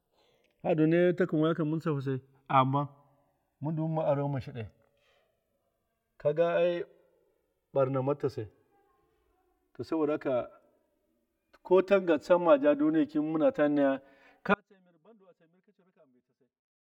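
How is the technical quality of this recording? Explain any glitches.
Two faults stand out in this speech recording: a slow drift between the stereo channels throughout, and an abrupt loss of signal near the end.

Channels drifting apart runs for the whole clip. The left and right channels were captured on separately clocked devices disagreeing by a few hundred parts per million, so the offset between them creeps up to a few milliseconds. Summed to mono, the moving comb notches give a slow, sweeping flange, unlike a fixed delay's static colouration.

Audio dropout to a faint residue begins at 14.54 s and lasts to the end. The speech cuts off abruptly, leaving only a faint leak roughly 35 dB below the normal level, likely because the source feed failed while the downstream path stayed live. The sudden edge and remaining trace distinguish it from a fade or a natural pause.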